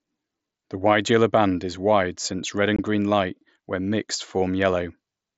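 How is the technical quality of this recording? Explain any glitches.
The recording has one clear glitch: a brief gap from 2.76 to 2.79 s caused by unconcealed Bluetooth headset packet loss. Voice data travelling between headset and phone went missing for about 22.5 ms, which fits roughly three lost packets. Nothing filled the gap, so the speech simply drops out and resumes with hard edges that can click. The audio passes through the mSBC headset codec, so it carries wideband speech up to 8 kHz.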